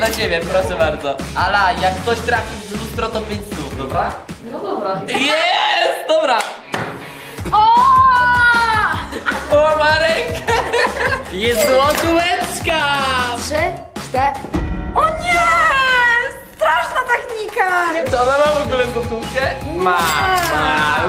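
No technical faults can be heard anywhere in the recording. Nothing breaks up, drops out or distorts at any point.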